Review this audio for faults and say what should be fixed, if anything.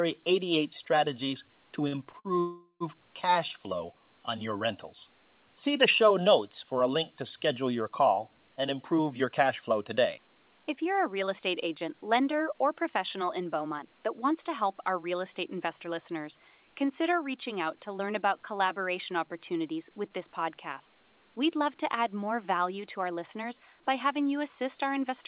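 Three short stalls from a late packet occur just after "strategies to": 1.88 to 1.95 s, 2.10 to 2.16 s and 2.19 to 2.28 s. Each time the jitter buffer ran dry, so the receiver held the last sound for 42 ms, 32 ms and 51 ms, giving a brief drawn-out buzz before the audio resumed where it had stopped. Nothing is lost, but each stall adds to the playout delay. A jitter buffer target that adapts faster to rising packet delay variation would absorb these.

A call audio freeze follows from 2.40 to 2.83 s, also after "strategies to". The last sound is extended as a fading buzz for about 408 ms, the final 120 ms of it silent, and then the audio resumes without a skip. This inserts a gap of roughly 0.4 s. The likely cause is a burst of packets held up in the network, draining the buffer completely. Prioritising the call traffic with QoS marking on the congested link would prevent it.

Jitter buffer speed-up follows each backlog. 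From 8.49 to 14.62 s the audio runs about 6% fast at unchanged pitch as around 0.4 s is trimmed in pitch-period pieces. Shorter runs occur at 20.24 to 21.04 s, after "about collaboration opportunities with", at 8%, and at 22.79 to 23.45 s at 10%, each removing around 70 ms and sounding hurried. Capping the acceleration rate so the excess delay drains more gradually would make this less noticeable.

The narrowband G.711 path, with nothing above 4 kHz, and room noise about 52 dB below the speech are part of the normal chain, not faults.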